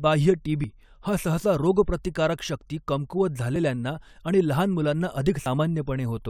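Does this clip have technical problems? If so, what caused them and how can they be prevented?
Yes. At 5.46 s the speech jumps abruptly, skipping ahead by something around 70 ms with no gap of silence, the likely result of a dropped buffer (overrun), where incoming samples were overwritten before the recording software read them and the surrounding audio was spliced together. On a waveform this shows as a sudden discontinuity at the join; on a spectrogram, a thin vertical broadband line with the speech pattern shifting across it. Using larger buffers and keeping the capture thread free of competing load prevents this.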